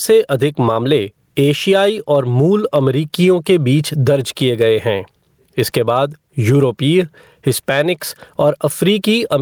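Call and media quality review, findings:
Gain pumping, throughout. Level swing around 15 dB, speech squashed. Likely mic gain set far too high with a fast limiter/compressor clamping down on every peak.

Hard clipping, 1.76–2.16 s, just before "और मूल अमरीकियों के". Peaks flattened, overdrive about 1 dB; brief crackle on loud speech. Signal exceeding converter/stage ceiling, flat tops adding high-frequency harmonics.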